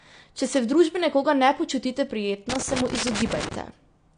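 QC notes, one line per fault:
Throughout: AAC compression. The speech sounds dull and smeared, with nothing above 9.8 kHz and a plainly audible warbling, fizzy texture on sibilants. This is likely low-bitrate AAC-LC coding, fitting roughly 32 kbps, where the encoder discards the top band and coarsely quantises the remaining spectrum.
2.50–3.55 s: loose connector crackle. Just after "družbi nekoga ne počutite", an irregular burst of crackle and scratching runs for about 1.1 s. A worn or dirty contact is rapidly making and breaking, chopping the signal into ragged fragments that are heard as crackle.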